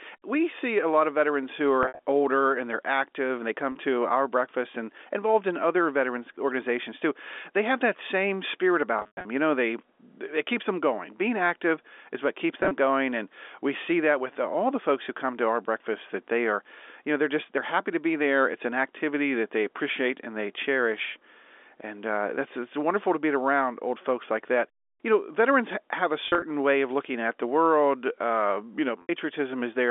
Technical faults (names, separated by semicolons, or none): packet loss with pitch repetition